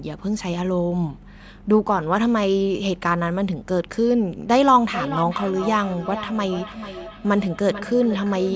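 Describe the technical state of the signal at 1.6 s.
At 1.6 s the speech is intact, with no fault; it has simply passed through normal call microphone processing, which limits the band to 8 kHz and trims the lowest bass.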